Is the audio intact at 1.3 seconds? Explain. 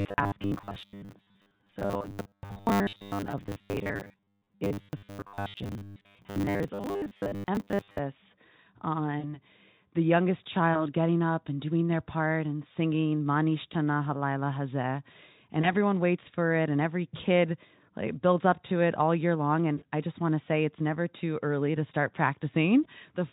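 No. Robotic sound from repeated short buffers runs from 0.01 to 7.99 s, covering 1.3 s. The speech has a rigid, metallic buzz at 100 Hz that only loosely tracks the words. The likely cause is new audio arriving too seldom, so playback keeps looping the last slice, about 10 ms long to match that buzz, while most of the real signal is skipped. The repetition imposes its own fixed-rate buzz on the voice.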